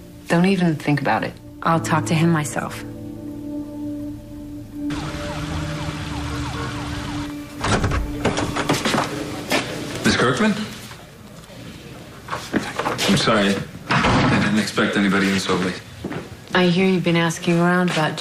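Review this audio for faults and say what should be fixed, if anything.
Compressed frames skipped at 5.50 s and 15.77 s: the audio jumps ahead about 150 ms, then about 70 ms, consistent with a few 26.1 ms frames dropped. Fix this by re-encoding from an intact source and verifying the file's frame integrity before delivery.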